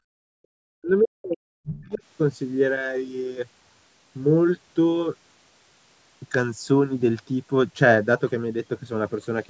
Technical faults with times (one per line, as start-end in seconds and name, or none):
0.00-0.48 background gated by the echo canceller
0.76-2.02 speech suppressed in double talk